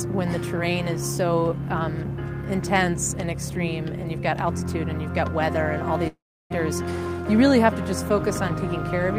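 A long network dropout, likely a break in packet delivery, cuts the sound from 6.07 to 6.52 s. The receiver stretches the last audio into a fading buzz, about 0.33 s of near silence follows, and playback resumes with about 0.42 s missing.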